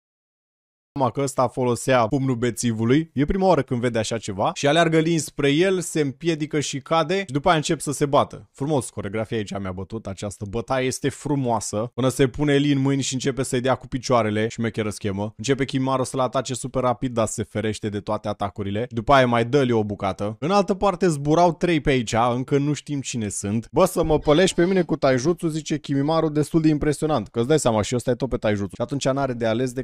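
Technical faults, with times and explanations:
0.00 to 0.96 s, cut-off start. Digital silence gives way at 0.96 s to sound already underway, with no natural attack, because capture began late.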